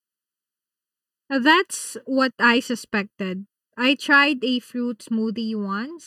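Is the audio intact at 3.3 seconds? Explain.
No. Throughout the speech, including at 3.3 seconds, one channel runs late by roughly 0.7 ms before the two are summed to mono, so channel delay (comb filtering) cancels shared content in evenly spaced notches from around 700 Hz upward, leaving a hollow, phasey tone.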